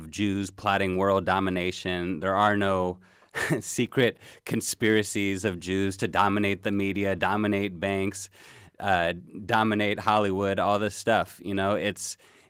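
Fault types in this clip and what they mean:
No faults heard here.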